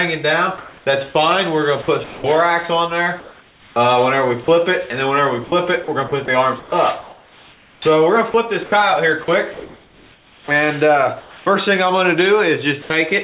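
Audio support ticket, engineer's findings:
Comfort noise in place of the background, 0.58–0.86 s: likely discontinuous transmission at the sender during a pause. About 280 ms of real background, sitting about 32 dB below the loud parts, replaced by smoother synthetic noise about 3 dB off in level, which fits RFC 3389 comfort noise.

Sound chopped by the voice detector, 1.82–2.24 s, 3.2–4.48 s, 5.44–11.46 s: sender detector toggling send/stop, likely misreading quieter sound as background. Holes filled with comfort noise: about 260 ms, 600 ms and 2.42 s respectively.

Sound dropped by the voice detector, 12.82–12.90 s: detector likely closed early on quiet sound. About 70 ms of sound lost inside an 80 ms comfort-noise fill, then the sound resumes when the detector retriggers. Call path band-limited at 4 kHz, consistent with G.711 mu-law at 64 kbps.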